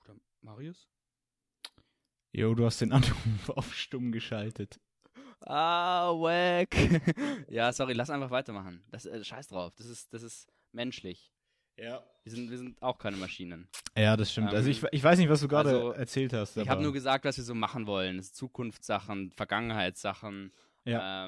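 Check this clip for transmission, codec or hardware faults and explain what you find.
Listening through the speech, I find no fault to report. Nothing in the recording calls for an explanation.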